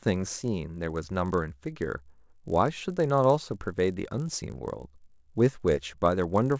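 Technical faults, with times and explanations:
throughout, resampler restarted on every block: a 50 Hz buzz sits under the speech and drops out in pauses. Each 20 ms block was converted separately, which fits a 48 kHz to 16 kHz conversion, so the filter lacked neighbouring samples and left a small error at every block edge.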